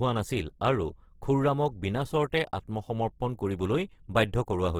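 It's a short speech clip with Opus compression damage running the whole way through, and it's plainly audible. The bandwidth isn't the problem, since content reaches up to about 20.2 kHz. The trouble is texture: the sound comes across rough and grainy rather than swirly. That fits an encoder likely running in its music-oriented CELT mode at a starved rate, somewhere around 16 kbps, and filling underfed bands with folded or noise-like content.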